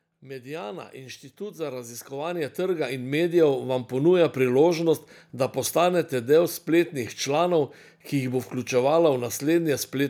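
From 0.07 s to 3.98 s the level climbs steadily by about 16 dB, a case of automatic gain rising: the gain control judged the incoming speech too quiet and kept raising its gain over nearly four seconds. Voice and room noise swell together, so the background grows as the talker gets louder. On a waveform the envelope widens like a ramp; on a spectrogram the whole frequency range, including the noise floor, brightens gradually.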